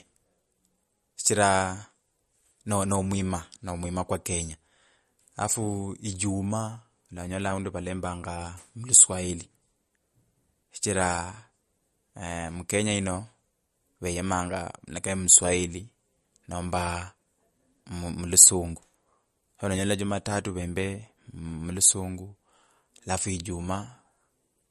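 Speech with a watery, swirly character throughout and no treble above about 12.6 kHz, most likely MP3 compression at a low bitrate around 43 kbps.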